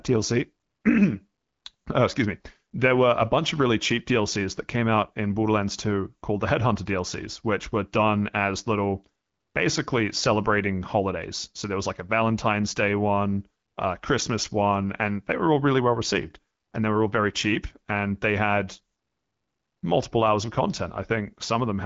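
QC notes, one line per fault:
Nothing stood out on listening to this speech clip.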